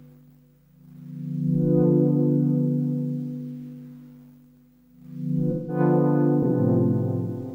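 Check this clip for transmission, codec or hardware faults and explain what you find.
One fault turns up: AAC frame loss with concealment, from 5.51 to 5.79 s. Part of the AAC stream never reached the decoder. About 170 ms of audio went missing, which fits roughly four lost frames. The decoder covered the hole by reusing the last good spectrum, with its phase and energy guessed rather than decoded. The result is a brief smeared, noisy or phasey patch where the sound loses definition before clean decoding resumes.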